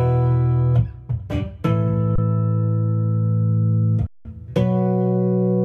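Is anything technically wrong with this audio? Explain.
Yes. There are two underruns with held sample, at 2.16 to 2.18 s (about 26 ms) and at 4.07 to 4.25 s (about 186 ms). The output buffer ran dry, so the converter held its last value. The sound goes flat and silent, then resumes where it stopped with only a soft edge. The longer gap fits an 8192-sample stall.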